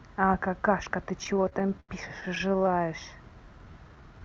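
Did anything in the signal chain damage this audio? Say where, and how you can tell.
Yes, in the network and buffer stage of the call path, which carries Opus-coded audio cut off at 8 kHz.

Repeated stalls (stutter) run from 1.19 to 2.84 s: 27 short holds, the longest 84 ms, adding about 344 ms in all, roughly a fifth of that stretch. Packets arrived late, the jitter buffer kept emptying, and the receiver extended the last sound, fading it in the longer waits. Unlike packet loss, nothing is cut out. The speech drags and hiccups rather than skipping.

A jitter buffer slow-down starts at 3.46 s and lasts to the end. The buffer was rebuilding its reserve by repeating single pitch periods and bits of pause, adding 104 ms, so this passage plays at about 88% speed. The pitch stays where it was, with sounds drawn out. A sample-rate mismatch would lower the pitch along with the tempo.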